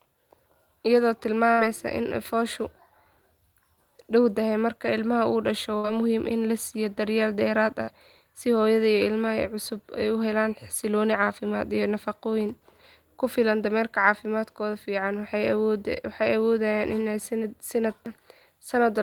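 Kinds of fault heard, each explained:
Burst of packet loss: several consecutive packets failed to arrive in time, so about 60 ms of speech went missing and the receiver stretched the last sound into a fading buzz or hiss, heard at 1.51, 5.78 and 7.82 seconds.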